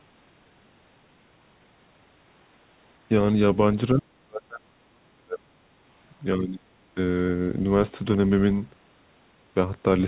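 Speech suppressed in double talk at 3.94 to 5.54 s and 6.37 to 6.7 s: the speech sinks by about 40 dB, then 30 dB, likely because echo control mistook overlapping talk for echo.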